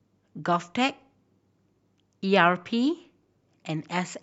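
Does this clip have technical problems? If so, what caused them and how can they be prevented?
No, there are no technical problems in this speech clip. With nothing gone wrong, there is no cause to trace and nothing to prevent.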